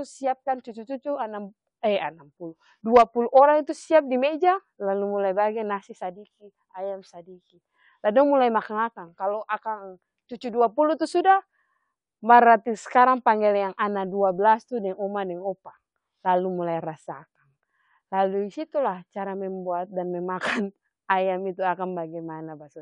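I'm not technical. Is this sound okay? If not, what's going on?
Yes, this sounds fine.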